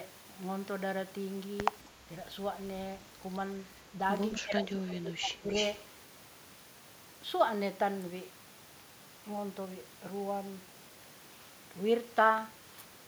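At 1.84 s, a very faint echo leak flickers for 0.05 s. A copy arrives 215 ms late, likely loudspeaker sound the echo canceller missed.

From 4.4 to 5.48 s, speech is suppressed in double talk. The voice drops deeply, around 20 dB, for about a second. The canceller likely muted both talkers together.

From 5.48 to 5.78 s, a stronger echo leak follows. A copy delayed 288 ms is roughly as loud as the speech. Residual loudspeaker pickup is the likely source.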